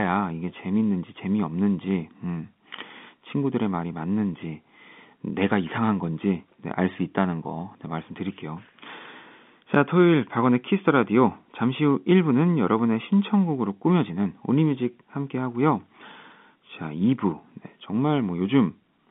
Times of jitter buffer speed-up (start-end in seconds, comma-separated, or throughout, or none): none